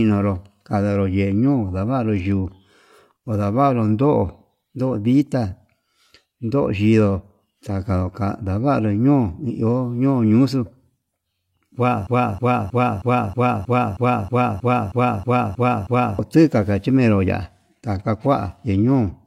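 At 12.07 s the speech locks into a broken-record loop. A 0.32 s fragment repeats exactly, back to back, 13 times until 16.19 s. The audio for that stretch is lost. Playback resumes at "tika ndachimero ya'á taka". A stalled player or stream likely caused it.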